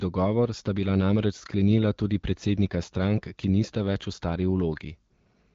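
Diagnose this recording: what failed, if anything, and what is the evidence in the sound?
Nothing in the recording stood out as a failure on listening.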